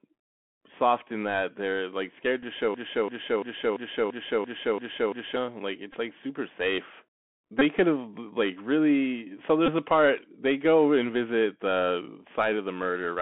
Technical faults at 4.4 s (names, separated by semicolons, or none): Bluetooth CVSD headset codec; broken-record loop